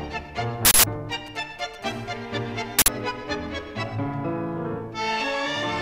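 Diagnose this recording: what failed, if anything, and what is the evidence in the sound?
Two hard bursts of digital noise, at 0.65 to 0.84 s and again at 2.79 to 2.88 s, each loud and harsh, are an uninitialised buffer at the driver or buffer stage. Blocks were sent to playback before any audio had been written into them, so stale memory was played out as samples. The first burst lasts about 186 ms, which fits an 8192-sample block. The second lasts about 93 ms, which fits a 4096-sample block.

From 1.12 to 1.84 s a galloping dit-dit-dit pattern of short rasping buzzes sits about 20 dB below the sound. These are GSM signalling bursts, picked up in the analogue wiring. A nearby 2G phone was exchanging brief bursts with its network, and some part of the audio circuit rectified the radio pulses. Each cluster carries the 217 Hz burst rate, heard as the short buzzes within the galloping pattern.

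Directly after, from 1.86 to 3.01 s, the pattern becomes a steady, raspy 217 Hz buzz with many harmonics, about 27 dB below the sound and unrelated to it. This is GSM phone buzz, again entering through the analogue wiring. The phone had gone into a call and was transmitting continuously at 217 bursts per second, and the rectified pulse envelope became audible. The second noise burst, at 2.79 s, lands inside this buzz.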